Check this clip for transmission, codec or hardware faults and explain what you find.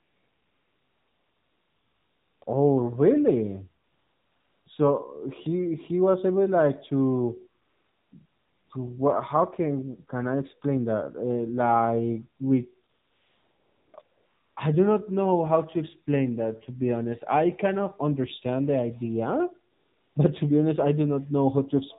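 Two faults from a mobile call path are present: the whole clip passed through an AMR narrowband mobile codec, and its pauses are filled with AMR comfort noise.

The AMR narrowband mobile codec runs for the full clip at 7.4 kbps. The speech was resampled to 8 kHz and rebuilt from a vocal-tract filter excited by a handful of pulses per subframe, so nothing above 4 kHz survives. At this low rate the damage is plainly audible: the speech sounds boxed-in and dull, with a buzzy, synthetic edge where the sparse pulse excitation cannot capture the real voice.

AMR comfort noise appears at 0.00 to 2.42 s, at 2.44 s just before "oh really", at 3.84 to 4.66 s, 7.62 to 8.12 s, 8.26 to 8.70 s just before "to what how can", 12.90 to 13.94 s, 14.02 to 14.56 s just before "I do not know", and 19.72 to 20.16 s. In each gap the sender stopped transmitting speech frames and the receiver synthesised noise from a coarse level-and-spectrum description. 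The real background drops out, replaced by a flat, steady hiss that switches in and out at these boundaries.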